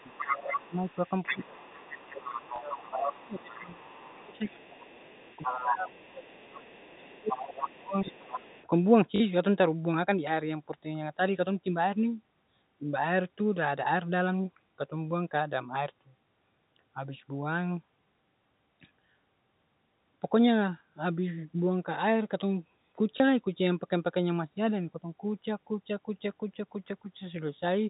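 A second, fainter voice sits under the speech from 0.0 to 0.57 s at about 5 dB below it, then again from 0.88 to 8.65 s at about 10 dB down. This is the other side's voice leaking through, likely loudspeaker echo the canceller failed to remove.

Over the same stretch the talker's speech sinks and breaks up from 0.53 to 4.65 s, dropping as much as about 20 dB. It dips more gently, by about 10 dB, from 4.96 to 5.14 s, and deeply again from 5.45 to 8.46 s. This is speech suppressed in double talk, likely the canceller turning down both voices while they overlapped.

A small blip occurs at 2.56 s, a brief robotic stutter over 9.16 to 9.20 s, and another small blip at 23.18 s. This is packet loss with the last packet repeated. The 40 ms gap fits two 20 ms packets.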